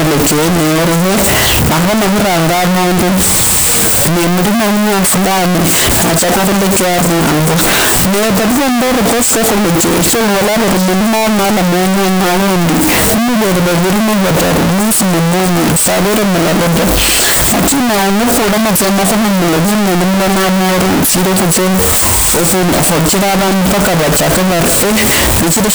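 From start to finish the speech is buried under loud, harsh distortion, and even the quiet stretches between phrases blast at roughly the same level as everything else, with no sense of dynamics left. This is most likely signed and unsigned mixed up in the 16-bit samples: with the top bit flipped, every small swing around zero is thrown to the opposite extreme of the range, so each zero crossing becomes a full-scale jump.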